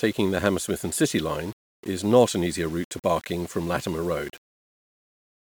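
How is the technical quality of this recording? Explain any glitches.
The recording is compromised throughout. Across the whole clip the speech sounds grainy and gritty. This is likely low bit depth without dither, fitting about 7 bits. Rounding error follows the signal, sitting roughly 25 dB below it, so quiet passages turn rough and sputter.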